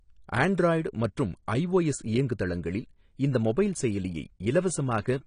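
A speech recording that sounds dull and muffled from start to finish, with nothing above 10 kHz and plainly audible coding damage throughout. The likely cause is AAC compression (AAC-LC), and the lowered bandwidth fits a low bitrate of around 32 kbps.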